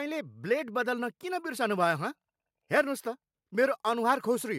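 Nothing goes wrong anywhere in this bit of speech, so there's no technical fault to point to at any moment.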